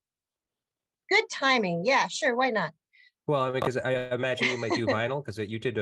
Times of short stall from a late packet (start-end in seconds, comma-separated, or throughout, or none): 3.50-3.55